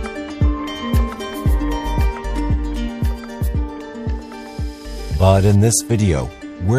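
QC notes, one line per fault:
No faults found in this clip. Nothing in the audio calls for a timed entry.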